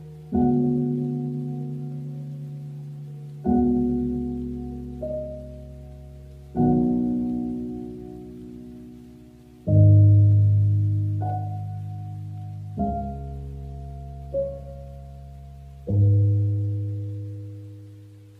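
Nothing in this audio is technically wrong.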